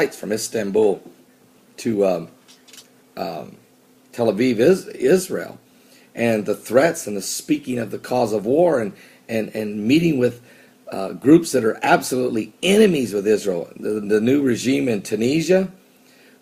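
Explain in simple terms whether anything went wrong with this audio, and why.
Yes, something went wrong, though it's subtle. There's clock drift between sender and receiver: the sending device's clock ran faster than the receiving one's, by something like five percent. That means audio kept arriving a little quicker than the receiver could play it out, so its holding buffer kept filling up. It never settles down, either. The mismatch runs for the whole clip, which is why the small stumbles keep coming instead of happening just once.

To cope, the receiver made repeated timing corrections from about 0.29 s right through to 16.19 s, snipping out tiny slivers of sound to catch up. The net effect is that the audio plays at about 105% speed. Each cut is small and they land at uneven spacing, so at most you'd notice a faint hiccup here and there and a slightly restless, unsteady pace rather than any obvious dropout.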